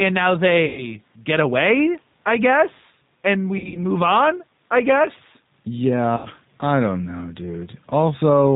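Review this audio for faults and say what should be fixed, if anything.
Gain pumping: the level swings by about 5 dB throughout, which squashes the dynamics. The likely cause is input gain set too high with a fast limiter or compressor pulling it back on every peak. To prevent it, lower the microphone gain and slow or relax the limiter so it only catches real overloads.

G.729 codec: the speech is band-limited to 4 kHz throughout and has a plainly audible rough, synthetic texture. This fits an 8 kbit/s G.729 coder, which rebuilds speech from a vocal tract model and sparse pulse excitation rather than transmitting the waveform. To prevent it, negotiate a wideband or higher-bitrate codec where the link allows.

VoIP packet loss concealed by the speech codec: concealment appears at 0.65 to 0.95 s (about 120 ms missing), at 3.58 to 3.79 s (about 120 ms in gaps up to 60 ms, scattered over 160 ms), and at 6.17 to 6.28 s (about 80 ms). 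In each, the decoder extrapolates from the last pitch and filter, stretching the sound into a fading buzz or coloured noise, and the speech stays weak briefly afterwards while its state recovers. To prevent it, improve network reliability or add jitter buffering and forward error correction. The room noise sits about 45 dB below the speech.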